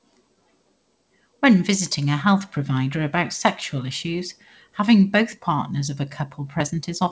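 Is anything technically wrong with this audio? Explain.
No, nothing is technically wrong with this speech recording. It has passed through a call path whose wideband codec, likely G.722, leaves nothing above 8 kHz, so the top end sounds band-limited in the way normal for such a call.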